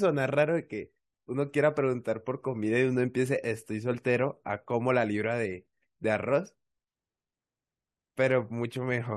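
No technical faults occur at any point in the speech.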